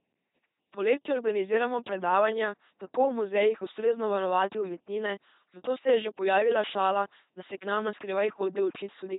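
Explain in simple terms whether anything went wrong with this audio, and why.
From start to finish the speech sounds buzzy and robotic, like a machine imitating a person, with some stretches turning into harsh buzz or breathy hiss where they shouldn't. It is also muffled, with nothing above about 3.9 kHz. This is the LPC-10 vocoder, an old low-rate speech coder. Instead of keeping the actual sound, it rebuilds each moment from a simple buzz or hiss passed through a rough model of the mouth, and here the damage is heavy.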